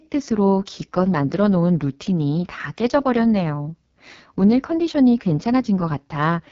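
From start to finish the speech carries the sound of the AMR wideband (HD Voice) codec at heavy damage. Nothing is present above 7.5 kHz, and the top band sounds like hiss rather than real detail. The speech turns rough and raspy because the pulse-driven vocal tract model is starved of bits, which fits the lowest mode, near 6.6 kbit/s. Narrowband AMR would cut off near 3.4 kHz, and MP3 at low rates would swirl rather than rasp.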